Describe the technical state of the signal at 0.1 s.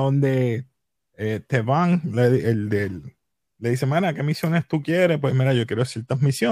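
At 0.1 s the signal is intact, with no dropout, distortion, noise burst or other technical fault at that moment.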